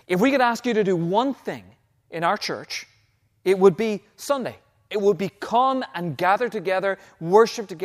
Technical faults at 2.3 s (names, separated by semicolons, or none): none